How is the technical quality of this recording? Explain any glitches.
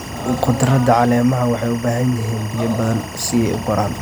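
The recording has one problem, and it runs the whole way through: timecode bleed. Linear timecode from a nearby track or cable has leaked into the speech, and since it's a square wave flipping between two pitches near 1 and 2 kHz, it comes across as a constant chirpy warble sitting behind everything. It's roughly 20 dB below the speech, so it's tucked back. Its rhythm matches 24 frames per second, which suggests film-rate code.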